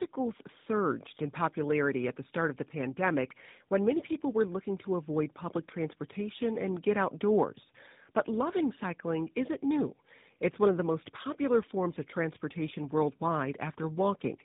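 Tandem speech coding runs throughout: the speech went through two low-rate speech codecs in a row, each re-encoding the previous one's already degraded output. The sound fits GSM full rate followed by AMR-NB, with nothing above 3.8 kHz, leaving it muffled, rough and warbly.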